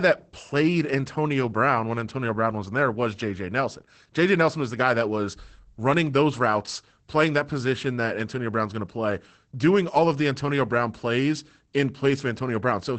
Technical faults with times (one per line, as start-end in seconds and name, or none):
0.00-12.98 Opus voice compression